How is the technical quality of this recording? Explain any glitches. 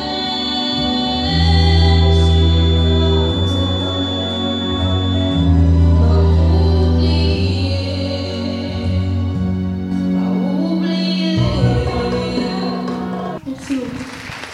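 The recording carries one clear fault, a feedback whistle at the start. From 0.0 to 5.56 s, a thin, steady tone at 3.5 kHz sits behind the sound. It stays roughly 10 dB below the main signal and swells and fades slowly in level. The likely cause is a loudspeaker-to-microphone loop held right at the edge of feedback. One high frequency keeps ringing there without building into a howl. It ends at 5.56 s.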